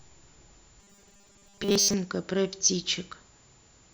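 A speech clip with robotic sound from repeated short buffers between 0.8 and 1.94 s. The voice becomes a rigid, metallic buzz at 200 Hz that loosely tracks the speech. Most of that stretch is repeated material. The likely cause is audio arriving too late, with 5 ms chunks looped to fill the gaps.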